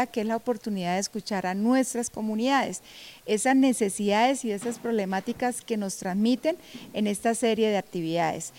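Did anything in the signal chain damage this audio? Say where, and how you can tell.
No, nothing in the signal chain stood out as damaging this audio when I listened to it.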